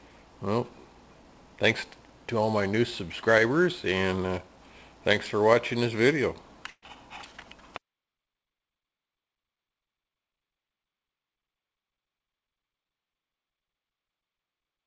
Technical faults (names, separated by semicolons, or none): burst of packet loss